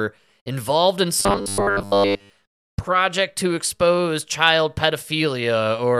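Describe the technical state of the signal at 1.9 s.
From 1.2 to 2.3 s, after "involved in", there is robotic sound from repeated short buffers: a rigid 100 Hz buzz, likely 10 ms chunks replayed while most new audio is skipped.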